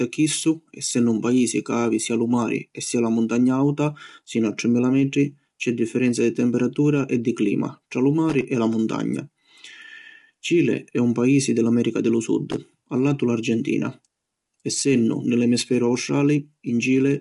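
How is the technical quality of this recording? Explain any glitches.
The recording has two problems: a steady coding degradation throughout and two short bursts of contact crackle.

The speech sounds rough and grainy throughout, with noise filling the gaps between harmonics and nothing above 11.6 kHz. This is likely low-delay AAC compression (AAC-ELD), with the damage fitting a bitrate around 32 kbps. Its short frames resolve pitch harmonics poorly, so the coder smears noise between them. Packet loss would cause intermittent dropouts, but this fault is constant graininess tied to the signal itself.

Loose connector crackle appears twice, from 8.29 to 8.44 s between "tra lu" and "e la muntagna", and from 12.51 to 12.66 s between "di lu" and "a latu". A worn or dirty contact rapidly makes and breaks, chopping the signal into an irregular 0.15 s burst of scratchy crackle. Digital clipping would follow loud peaks, and a single dropout would be a clean gap. 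These bursts are ragged and unrelated to the speech level.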